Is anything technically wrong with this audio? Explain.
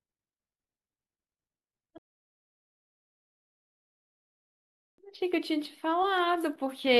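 Yes. At 1.98 s the speech drops abruptly into silence and stays silent for 3 s, until 4.98 s, when it picks up again precisely from the point where it broke off, with nothing skipped. This is a rebuffering stall: playback drained the downloaded audio faster than new data arrived, so the player halted and waited for its buffer to refill. No content is lost, but the clip is stretched by those 3 s of dead air.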